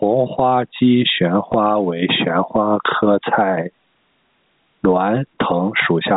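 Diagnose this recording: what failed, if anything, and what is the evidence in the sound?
Gain pumping runs through the whole recording. The level swings by something like 25 dB. The likely cause is input gain set far too high for the microphone, with a fast limiter in the call-processing stage clamping down on every loud syllable. That squashes loud and soft passages together. The narrow telephone band of the G.711 coding is audible too.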